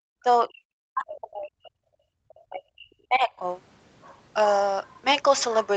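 Right at the start, 0.14 to 0.27 s and again from 0.47 to 1.8 s, the speech sinks by something like 40 dB in chunks, most likely speech suppressed in double talk. The canceller couldn't tell the talker from the far end and clamped both.

At 2.08 to 2.17 s the room sound drops by about 28 dB. That's background gated by the echo canceller, slamming the mic down while the loudspeaker played.

Then 2.29 to 2.33 s brings a faint scrap, way under the speech, that's likely the other side's voice leaking through, left over from incomplete echo removal.

From 2.45 to 3.46 s the dips return, cutting out most of that stretch, probably more speech suppressed in double talk, the same clamping as before.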